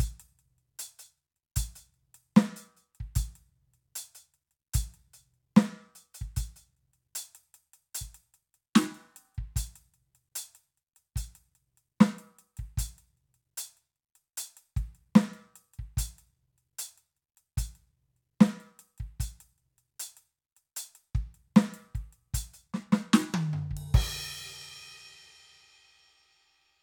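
A music recording with a brief stream fault near its end: at 25.61 s the audio path most likely lost a tiny run of dropped samples, a fraction of a millisecond of data, so the waveform leaps straight from one value to a later one with nothing in between. No musical material goes missing over so short a gap, but the sudden step is heard as a single sharp click and shows as a thin vertical line across the spectrum.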